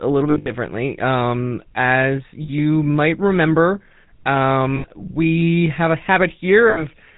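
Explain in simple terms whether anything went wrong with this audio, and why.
GSM full-rate codec, throughout: this old phone codec simplifies the voice and discards everything above 4 kHz, so the speech sounds buzzy, gravelly and muffled.

Lost GSM frames, at 0.3–0.5 s (after "a little"), 2.42–2.50 s (before "might remember"), 4.76–4.85 s (before "we have a") and 6.7–6.83 s: pieces of the signal went missing, and the decoder repeated the last good piece, leaving brief rough, metallic rings.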